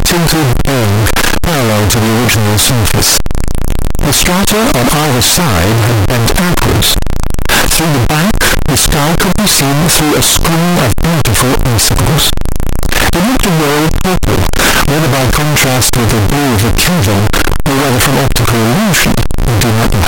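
From the first moment to the last, the speech is buried under very loud, harsh distortion that points to signed and unsigned mixed up, likely with 16-bit samples read in the wrong format. Flipping the top bit turns every zero crossing into a full-range jump, so even pauses blare. Unlike ordinary clipping, quiet passages are as loud as the rest, and unlike a byte-order swap, the distortion is a constant coarse roar rather than hissing noise.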